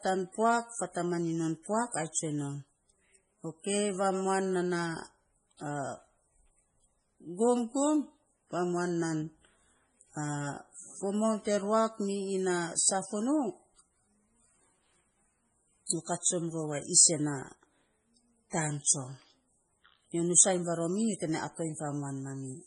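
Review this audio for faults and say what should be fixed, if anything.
The whole recording has that heavy, watery swirl of MP3 compression, with nothing at all above 10.5 kHz, so the top end is just gone. This is likely a low-bitrate encode, and the sound fits something around 24 kbps. At that rate the encoder cuts the treble at a fixed point and keeps dropping weak frequency lines in and out between frames. To prevent it, keep the master uncompressed and encode at a far higher bitrate.

There's also pre-echo in two places: a short hiss from 15.86 to 15.89 s, just before "nyo kat", and again from 18.50 to 18.52 s, just before "taan tsom". Both times a sharp onset sits late in a transform block, and the codec spreads noise sized for the loud part across the whole block, so the hiss arrives early, about 29 ms and 24 ms ahead, and the onsets sound softened. To prevent it, use a higher bitrate or an encoder that switches to short blocks on attacks.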